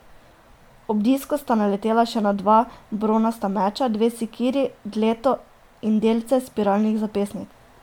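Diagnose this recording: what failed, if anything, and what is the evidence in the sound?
Generation loss, throughout the speech. The codec stage is the likely cause: the sound has a swirly, hollow, smeared quality, with consonant attacks blurred more than a single pass at a rate that fits 128 kbit/s MP3 would explain, though content still reaches 20.1 kHz. It suggests around five successive encodes, each pass re-quantising on a shifted frame grid, so the noise and spectral holes from every generation stack on top of each other.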